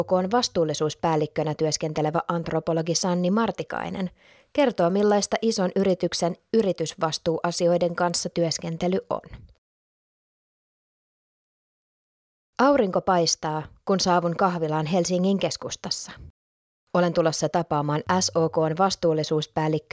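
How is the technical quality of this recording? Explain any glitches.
There's one real glitch. From 3.7 to 8.2 s you get a steady ticking at 10 per second, and it only shows up while there's signal. That's a resampler restarted on every block. The audio was chopped into 100 ms blocks and each one was converted on its own, probably down to around 16 kHz judging by the dulled top end. At every block edge the filter had no real neighbouring samples to work from, so each boundary picks up a small error, and those errors are the regular clicks.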